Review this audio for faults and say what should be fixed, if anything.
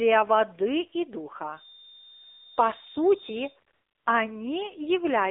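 The whole clip carries the AMR narrowband mobile codec sound. The speech is confined to roughly 300 Hz to 3.7 kHz, with nothing above 4 kHz, and the plainly audible buzzy, synthetic texture fits a low AMR-NB mode around 7.4 kbps, where a few excitation pulses per subframe drive a vocal-tract model. This is not simple low-pass filtering: a filter would only dull the sound, while this codec also roughens it. Prevent it by carrying the call on a wideband codec or a higher bitrate mode.

From 3.74 to 4.06 s there is AMR comfort noise. For 320 ms the transmitter treated the input as silence and sent no speech frames, so the receiver filled the gap with smooth synthetic noise shaped from a coarse level and spectrum description. It differs from a dropout, which would leave dead silence or a glitch, because this gap holds a steady, even hiss that switches in and out. Prevent it by tuning voice activity detection so quiet stretches still count as active.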